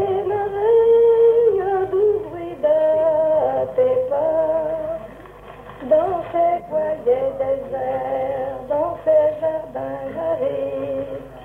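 No technical faults can be heard at any point in the clip.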